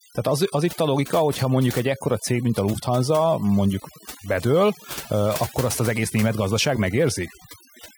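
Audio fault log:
Throughout, overdone noise removal: the background drops and breaks up into twinkling specks. Noise reduction set too strongly is cutting individual frequency bands whenever they sit close to the noise estimate, taking the quieter parts of the speech along with them.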